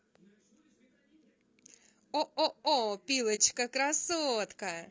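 Low-delay AAC compression runs through the whole recording. The speech sounds rough and grainy, with noise filling the gaps between pitch harmonics and a thin, synthetic-sounding top band. This is likely AAC-ELD, whose short frames resolve harmonics poorly, and the level of damage fits a bitrate around 32 kbps.

AAC frame loss with muting occurs from 3.35 to 3.40 s. The decoder zeroed the missing spectrum, and the overlapping windows fade the speech out and back in, leaving a soft-edged gap of about 50 ms around 30 ms of lost audio, consistent with one dropped frame.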